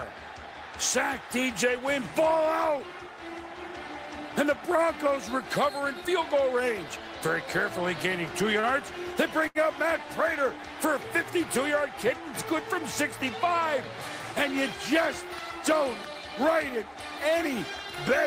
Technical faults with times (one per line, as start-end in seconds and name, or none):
8.60-8.66 short stall from a late packet
9.47-9.58 short stall from a late packet